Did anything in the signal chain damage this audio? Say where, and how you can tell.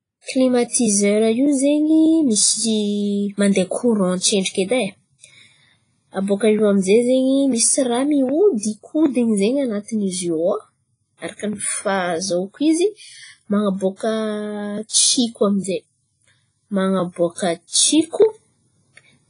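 Yes. The codec stage is the problem, likely a low-bitrate WMA compression pass. The speech sounds washy and ringing throughout, with hiss that swells and fades along with the signal. Nothing survives above 10.1 kHz, and the heavy damage points to a bitrate around 24 kbps.

The same codec also causes pre-echo from 14.89 to 14.93 s. A short hiss arrives about 38 ms before a sharp attack, which then sounds softened. The encoder spread quantisation noise across a whole block, so noise sized for the loud onset also filled the quiet moment before it.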